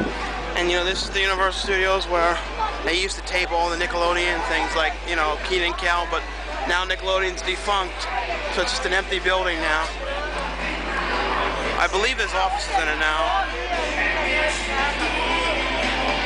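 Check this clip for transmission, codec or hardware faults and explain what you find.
There is one hardware fault, mains hum, present for the whole clip. A steady low tone sits at 50 Hz, with a few low harmonics. It is strong, roughly ten decibels below the sound itself. Power-line current leaks into the signal path, likely through a ground loop or nearby transformer.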